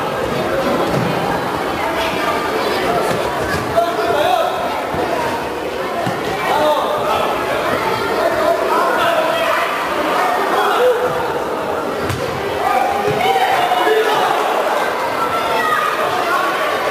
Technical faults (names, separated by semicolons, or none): sample clock jitter